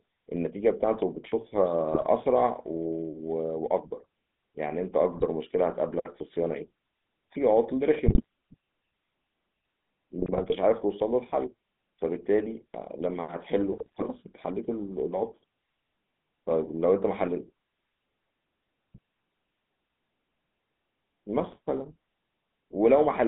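It's a speech clip that's been through a GSM full-rate codec the whole way: the line is squeezed to roughly 150 Hz–3.6 kHz and the voice has that gravelly, buzzy roughness from pulse-driven vocal-tract modelling, which fits the old 13 kbps coder. On top of that there are bursts of GSM bit errors at 1.91–2.07, 5.12–5.28, 8.06–8.26, 10.20–10.56, 13.72–14.03 and 21.37–21.57 s, where corrupted filter, pitch and gain values make it squawk and gargle for 8 to 17 frames.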